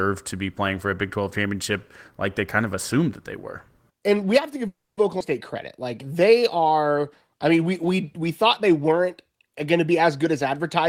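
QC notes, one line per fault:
4.67–4.99 s, call audio freeze: the sound stalls for about 0.3 s. The last sound carries on briefly as a fading buzz, then about 250 ms of near silence follows, and the audio resumes where it stopped with nothing lost. The likely cause is delayed packets draining the jitter buffer. A spectrogram shows a smeared, decaying band, then a blank gap.
5.19 s, skip ahead: playback jumps forward, dropping roughly a tenth of a second of speech. The join is almost direct, with only a tiny filler, as the buffer discards audio to cut the delay that built up. The waveform shows an abrupt splice, and the spectrogram shows formant tracks that break and restart mid-trajectory.
5.53–6.62 s, jitter buffer slow-down: the speech runs at about 92% speed with unchanged pitch, stretched by 91 ms as single pitch periods are repeated to rebuild the buffer's reserve. On a spectrogram the harmonic spacing is unchanged while syllables are elongated, and the waveform shows repeated identical cycles.
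10.19–10.84 s, jitter buffer speed-up: the speech runs at about 119% speed with pitch intact and sounds hurried, because roughly 150 ms of short pitch-period chunks are cut out to shrink an overfull buffer. The spectrogram shows compressed syllable durations with unchanged harmonic spacing, and the waveform shows slight discontinuities at the cut points.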